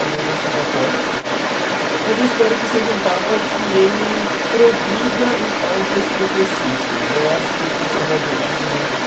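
Throughout the speech, from 0 to 9.06 s, a second voice is leaking through at roughly the same level as the talker, likely from loudspeaker echo the canceller left in the microphone.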